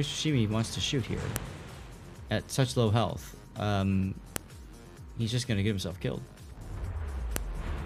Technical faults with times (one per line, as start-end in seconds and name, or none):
1.36 file header played as audio
4.36 file header played as audio
7.36 file header played as audio